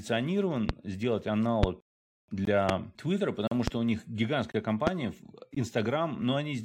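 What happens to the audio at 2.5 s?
A brief hole of silence cuts through the speech from 2.45 to 2.47 s, with abrupt edges on both sides, so the sound stops dead and resumes just as suddenly. This is a gap between stream segments: the time stamps of two consecutive pieces of the stream don't meet, leaving about 19.5 ms uncovered, and the player fills that space with silence. The placement fits segments about one second long. Nothing is lost, only delayed.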